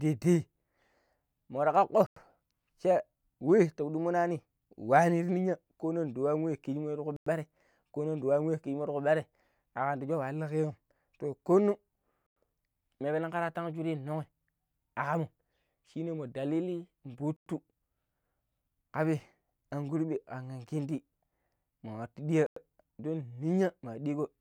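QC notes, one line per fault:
2.06, 7.16, 12.26, 17.36 and 22.46 s, gap between chunks: the speech drops into silence for 0.1 s at each point, every 5.1 seconds. The audio arrived in 5-second chunks with silence left between them, leaving a short hole at every join.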